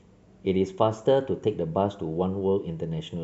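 Listening closely to the speech, nothing stood out as a technical problem at any point.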